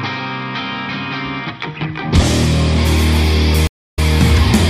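At 3.67 s the audio drops out completely for about 224 ms, and when it returns it picks up roughly 104 ms earlier than where it stopped, so a short stretch is heard twice, easing back in rather than starting at full level; the disturbance is over by 4.0 s. This is a stream reconnect: the connection broke, playback fell silent, and the player reconnected and restarted its decoder mid-stream, with the server resending a little already-played audio.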